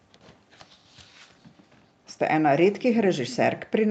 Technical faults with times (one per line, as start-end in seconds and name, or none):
1.10-2.06 background gated by the echo canceller
3.28-3.62 echo leak